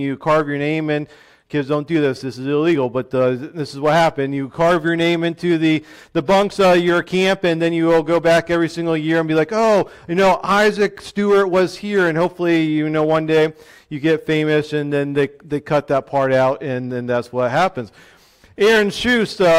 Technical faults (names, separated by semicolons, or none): none